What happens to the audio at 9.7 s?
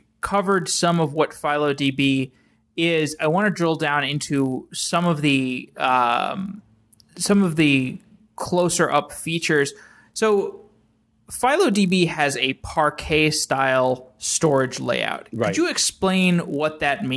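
At 9.7 s the speech carries the same fault heard across the whole clip: a resampler restarted on every block. The conversion from 48 kHz down to 24 kHz is done in 20 ms chunks, each processed in isolation, so the filter lacks its true neighbouring samples at every chunk boundary. Each edge picks up a small discontinuity, and at 50 per second these merge into a steady 50 Hz buzz that rides on the speech and drops away in pauses.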